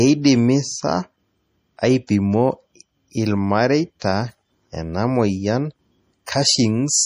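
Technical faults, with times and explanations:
Throughout: MP3 compression. Nothing is heard above 15.2 kHz, and the sound is plainly watery and swirly. The likely cause is a low bitrate near 40 kbps.
2.07 s, 4.00–4.02 s and 6.26 s: pre-echo. A short hiss of 16 to 22 ms comes just before sharp attacks, because block-wide codec noise fills the quiet moment first.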